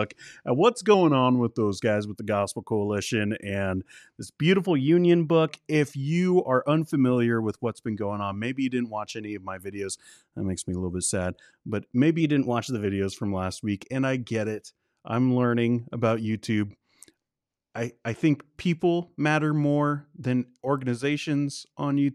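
Right after "at what's", from 0.94 to 1.75 s, the speech slows by about 6.5% and drops roughly a semitone (115 cents), then snaps back before "guys with the". The same jump happens upward after "and this" (4.62 to 5.49 s) and after "bit sad but maybe" (12.21 to 12.86 s), about 6.5% faster and 108 cents sharp. Those abrupt, matched speed-and-pitch shifts are likely a drift correction step, with clock-matching software briefly changing the rate to manage its buffer.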